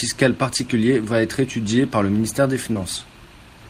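Short concealed packet loss at 2.73 to 2.77 s, just after "par le ministère des": about 20 ms of speech never arrived, and the receiver extrapolated the preceding sound, leaving a brief smear.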